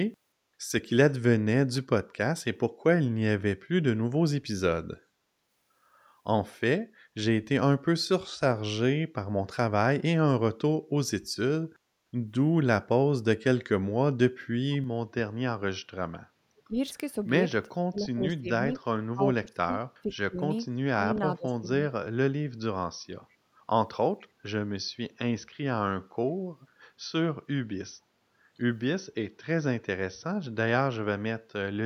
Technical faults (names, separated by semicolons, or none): input switched to a poorer device; speech suppressed in double talk; echo leak